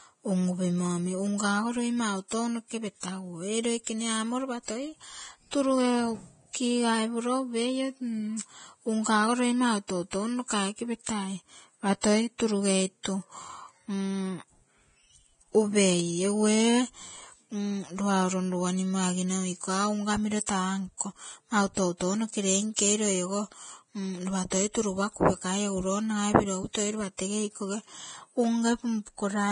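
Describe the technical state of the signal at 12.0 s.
At 12.01 to 12.04 s, a pre-echo appears. The transform codec spread its quantisation noise evenly across a coding block, and a sharp attack fell late in that block. The noise sized for the loud onset also filled the quiet stretch before it, about 25 ms. The result is a brief hiss ahead of the attack, which itself sounds softened and smeared rather than crisp.

Underneath this moment, and across the whole clip, the speech carries Vorbis compression, likely at a low quality setting, which fits a bitrate somewhere in the low twenties of kbps. The encoder has cut everything above 9.7 kHz and quantised the remaining treble so coarsely that fine detail has turned into noise of similar energy. The treble sounds hissy and grainy, tones are roughened, and attacks are blurred.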